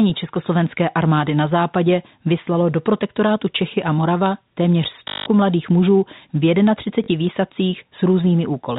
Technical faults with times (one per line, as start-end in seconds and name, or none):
5.08-5.26 packet loss with last packet repeated
7.04-7.08 packet loss with last packet repeated